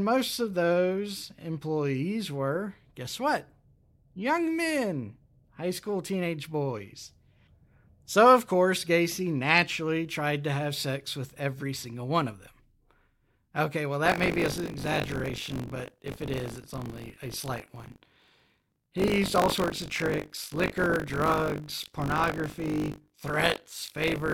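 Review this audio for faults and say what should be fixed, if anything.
From 14.04 s to the end at 24.3 s, the speech takes on a robotic 50 Hz rattle that sounds only while someone is talking. That is buffer tearing. The writing program and the playback hardware have drifted until they cross within each 20 ms period, so a small slice of every buffer replays audio from roughly 40 ms earlier, spliced in with hard edges. Keeping the write pointer locked a safe margin ahead of the read pointer, with underrun recovery that resynchronises them, prevents it.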